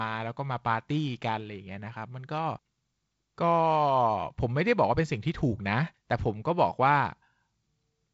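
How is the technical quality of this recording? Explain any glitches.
No glitches to report: the speech sits in G.722 wideband telephone coding at what sounds like 48 kbit/s, with nothing above about 7.7 kHz and only light coding texture.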